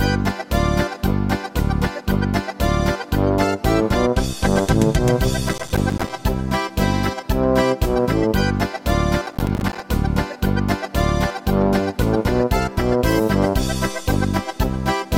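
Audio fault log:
5.49–6.10 s and 9.27–9.80 s: processor overload crackle. The processor misses buffer deadline after deadline, leaving dozens of tiny silent gaps that chop the sound into gritty tearing.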